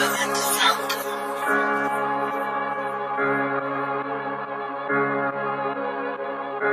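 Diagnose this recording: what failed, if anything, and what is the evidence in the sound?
Nothing failed, and nothing in the sound gives evidence of a fault.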